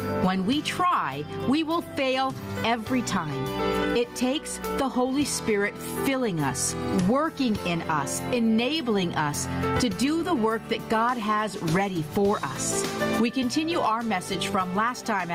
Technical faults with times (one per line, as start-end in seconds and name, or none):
0.00-15.34 gain pumping